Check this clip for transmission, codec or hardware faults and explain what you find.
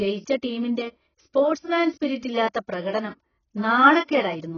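There is one codec fault, and it runs through the whole speech clip. Nothing is present above 6.8 kHz, so the top of the spectrum is simply missing. The sound is dull and smeared, with heavy damage. The likely cause is AAC compression, specifically AAC-LC at a very low rate, which fits a bitrate of around 14 kbps. The encoder quantises each frame's frequency lines coarsely against a hearing model. It drops the highs and thins the bands that remain. Sibilants turn fizzy and sustained sounds warble.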